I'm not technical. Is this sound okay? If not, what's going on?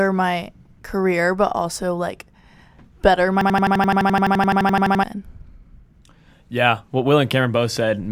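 No. From 3.41 to 5.04 s the computer froze, and this is a system hang loop: the sound hardware kept replaying the same 85 ms scrap, about 12 times a second, making a machine-gun stutter. About a second and a half of speech is lost.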